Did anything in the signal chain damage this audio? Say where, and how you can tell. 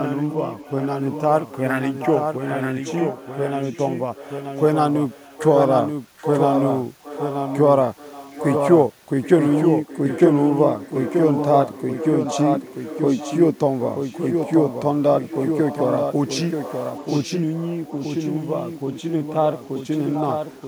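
Yes. Throughout the clip the speech is doubled: a clean, full-band copy trails by about a second, a few decibels quieter, with no decay or room colour. This doubled audio track most likely comes from a capture or editing stage that holds two out-of-step copies.

A second, fainter repeat sits 769 ms behind the speech from 0.3 to 8.63 s, 9.22 to 18.19 s and 18.76 to 20.62 s. It is roughly 10 dB down, and weaker in the last stretch. This echo leak is likely call processing, where a loudspeaker echo canceller left residue that was sent back.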